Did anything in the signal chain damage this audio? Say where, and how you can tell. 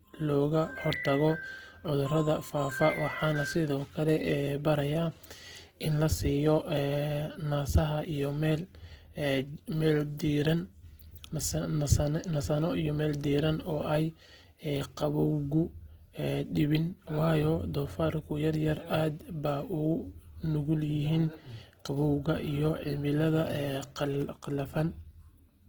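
Yes, at the codec stage. The speech carries plainly audible Opus compression throughout, likely from its music mode at around 16 kbps. Starved bands are refilled with folded or noise content, so tones sound grainy and rough. A spectrogram extends to about 20.2 kHz, but its upper bands look smeared and noise-textured.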